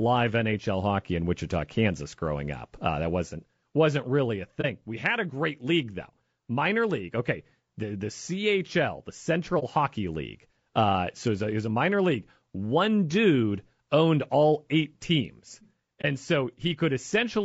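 Low-delay AAC compression runs through the whole speech clip, likely AAC-ELD at a rate around 32 kbps. Its short frames resolve pitch harmonics poorly, so the voice sounds rough and grainy, with noise filling the gaps between harmonics and a thin, synthetic top band.

AAC frame loss with muting occurs at 4.61 to 4.66 s, 9.59 to 9.64 s and 16.01 to 16.05 s. Each gap points to a single lost frame whose spectrum the decoder zeroed. The overlapping windows fade the sound out and back in, leaving a brief, soft-edged hole.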